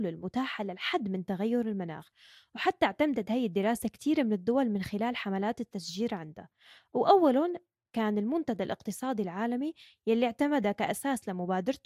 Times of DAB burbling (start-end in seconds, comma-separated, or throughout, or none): 10.92-11.02